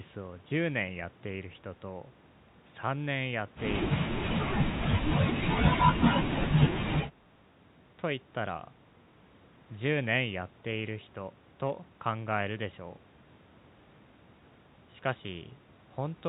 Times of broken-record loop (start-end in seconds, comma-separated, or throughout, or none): none